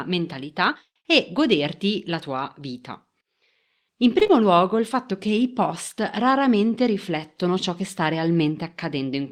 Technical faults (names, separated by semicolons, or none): short concealed packet loss